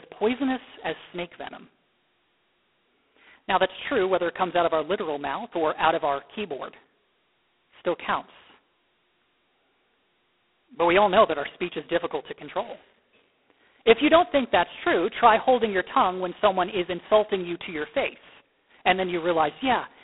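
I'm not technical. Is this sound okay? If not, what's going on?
No. From start to finish the speech sounds thin and boxed-in, like an old phone line, with a harsh, rasping hiss that grows louder whenever the speech does and fades when it drops. This is G.726 ADPCM, a telephone coding method that stores only a rough record of how each tiny slice of sound differs from a prediction based on what came before. Here it's squeezed very hard, so those records come out coarse and gritty, and all the crisp upper sounds are cut away.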